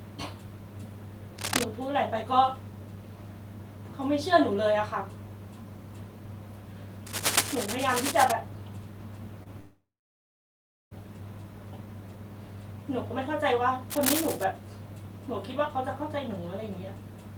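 From 1.39 to 1.64 s, then 7.06 to 8.32 s and 13.90 to 14.44 s, a dense, uneven crackle sits over the speech at roughly its own loudness. This is cable scratch noise, likely a worn connector or cable being moved. Unlike a dropout, the speech keeps running underneath the rustle.

At 9.43 to 9.48 s comes a short concealed packet loss: about 20 ms of audio never arrived, and the receiver extended the preceding sound to cover it. The result is a brief smear or wobble with no gap.

From 9.60 to 10.93 s a long network dropout follows, likely from the connection stalling for about 1.3 s. A short fading continuation of the last sound gives way to a little over a second of silence, and the speech resumes with that stretch missing rather than delayed.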